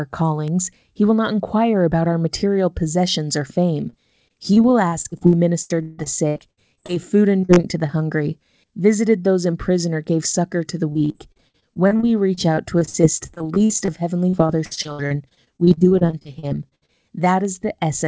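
At 0.48 s a bit error spike flips a value across three consecutive samples, producing one sharp tick unrelated to the speech. On a waveform it is a lone vertical needle; on a spectrogram, a thin full-height line reaching the 8 kHz ceiling of the G.722 call path.

Repeated packet loss (robotic sound) follows in four stretches. The first runs from 3.90 to 6.90 s, starting after "material possessions or fame" and ending before "food and". It has 18 gaps, the longest 163 ms. Next comes 7.40 to 7.91 s, between "food and" and "hungry visited those in", with 5 gaps. Then 10.93 to 13.92 s, after "gave succor to the", with 26 gaps. Last is 14.29 to 16.90 s, again with 26 gaps. In each stretch roughly a fifth to 28 percent of the time is missing audio, patched by extending the preceding sound. This gives choppy speech with pieces missing. The spectrogram shows smeared, repeated frames with abrupt seams, and the waveform shows stuttering, looped cycles.

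At 17.45 s a second single-sample bit error spike gives another isolated click. It appears as one needle and a broadband vertical stripe.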